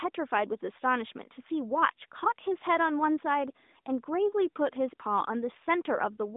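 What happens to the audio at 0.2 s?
Nothing goes wrong at 0.2 s: the speech there carries only the steady narrowband sound of the AMR mobile codec, with no dropout, click or other fault.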